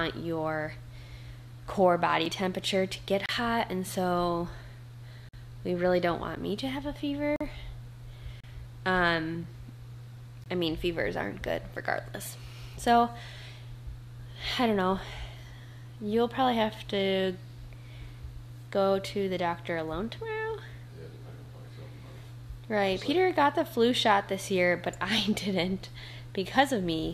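Gaps between stream segments occur at 2.25, 3.26–3.29, 5.29–5.34, 6.36, 7.36–7.41, 8.40–8.44, 9.43 and 10.44–10.46 s. They fall roughly once a second, which fits 1-second segments whose timestamps leave holes that the player fills with silence. Each is a hard-edged dropout of about 5 to 47 ms, and no audio is lost.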